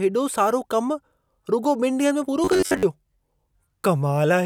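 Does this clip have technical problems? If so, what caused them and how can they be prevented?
Yes. From 2.44 to 2.85 s the speech turns into robotic sound from repeated short buffers, a rigid metallic buzz at 93.8 Hz that only loosely follows the words. The likely cause is audio arriving too late, so the player repeats a slice of about 10.7 ms for most of that stretch. A spectrogram shows evenly spaced horizontal lines at multiples of 93.8 Hz, and the waveform shows one short shape copied end to end. A larger jitter buffer and steadier delivery would prevent it.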